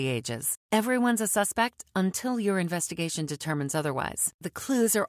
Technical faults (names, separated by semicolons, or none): none